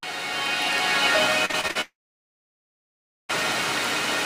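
From 1.45 to 1.77 s the stream suffers repeated packet loss, producing a robotic sound. Packets kept going missing or arriving too late, and each time the receiver patched the hole by extending the last fragment it had. The holes point to about five separate losses, the longest near 41 ms, and together they cover about 140 ms, or roughly two-fifths of the stretch. The result is choppy, robotic audio with small pieces cut out.

Right after, from 1.81 to 3.31 s, the audio breaks off for about 1.48 s, likely a long network dropout in which nothing reached the receiver. The last sound is carried on briefly as a fading buzz or hiss, then about 1.35 s of silence follows. When the audio resumes at 3.31 s, it picks up later in the material, and the section that never arrived is simply gone.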